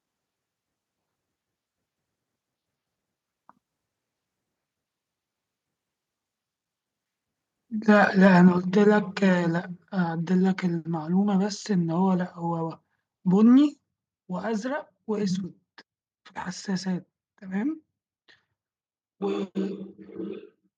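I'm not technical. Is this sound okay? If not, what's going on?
No. Microphone overload, from 7.89 to 8.37 s: the loudest moments of speech take on a harsh, crackly edge. The likely cause is the microphone being set too loud, so the tops of those peaks get sliced off.

Microphone volume stepped down, at 8.58 s and again at 13.74 s: the voice and the background suddenly drop to a quieter level. This is likely the call software noticing the distortion and turning the microphone down, first right after the crackle, then again later.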